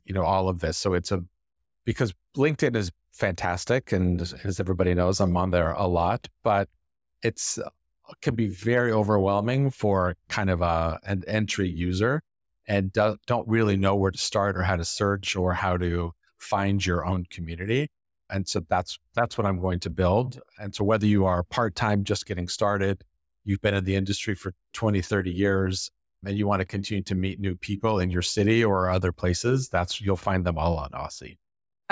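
No technical faults are audible anywhere in the speech recording.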